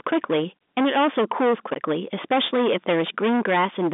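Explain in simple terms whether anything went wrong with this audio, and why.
Something did go wrong. The speech is hit by hard clipping from start to finish. The signal was pushed far louder than one stage in the chain could handle. So every loud peak got sliced off flat. Roughly a third of the waveform is chopped this way. Those flat edges create harsh extra tones high up. You hear them as a rough, buzzing fuzz on nearly every syllable. The narrow telephone sound from the G.711 line coding doesn't hide it.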